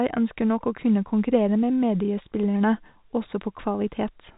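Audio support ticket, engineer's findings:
Nothing stood out on listening to the speech, which carries the expected telephone-band character of G.711 coding with nothing above about 4 kHz.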